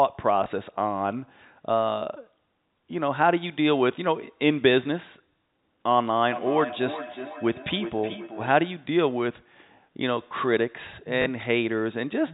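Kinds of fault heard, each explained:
Packet loss with last packet repeated: When audio goes missing, the receiver fills the gap by replaying the most recent chunk, and the copy does not line up with the waveform's period. Here it happens at 0.44–0.46 s (20 ms) and 11.22–11.26 s (40 ms, a brief robotic stutter that fits two 20 ms packets). On a waveform the identical segments sit side by side with a step at each join; a spectrogram shows a thin vertical line there.
Feedback echo between two devices: Two devices in the same room share a call, so one device's loudspeaker plays sound that the other's microphone then captures and sends back round, beyond the reach of either echo canceller. From 6.32 to 8.56 s, the sound returns at intervals of around 0.4 s, at most about 11 dB below the direct signal, thinner and ringing. A spectrogram shows faded, evenly spaced copies of each utterance trailing it; the waveform shows smaller repeated envelopes.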